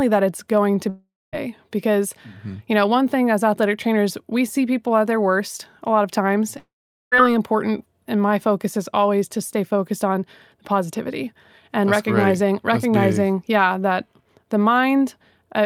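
At 0.89 to 1.35 s and again at 6.59 to 7.14 s, the speech smears into a fading buzz, then silence, and resumes with a chunk missing. This is likely a long network dropout, with the receiver filling the gap.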